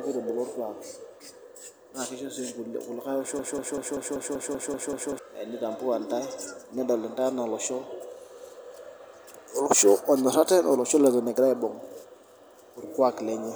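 Broken-record loop, 3.39 to 5.19 s: a 192 ms fragment repeats nine times back to back, likely from a stalled player, losing the audio underneath.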